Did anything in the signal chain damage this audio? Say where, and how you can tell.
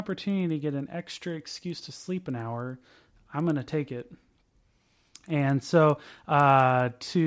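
Yes, at the sample-rate converter: the resampler restarted on every block, resampling each 100 ms chunk from 44.1 kHz to 16 kHz in isolation. That leaves steady 10 Hz ticks throughout the speech, seen as thin vertical spectrogram lines every 100 ms.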